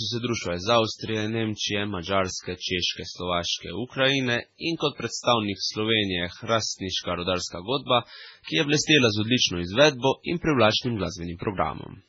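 From start to end the speech carries heavy MP3 compression damage: nothing survives above 7.6 kHz, and faint spectral detail flickers in and out between frames. It sounds watery and swirly, with chirpy s sounds and smeared onsets. That is likely a very low bitrate, around 16 kbps. A plain low-pass filter would dull the treble without any swirl.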